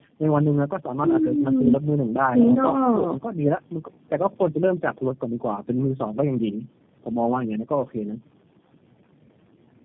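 Speech with tandem speech coding throughout. It passed through three low-rate speech codecs in a row, which fits a chain ending in G.729A. Each recoded the last one's output, so the speech sounds rough, muffled and warbly. Nothing remains above 3.6 kHz.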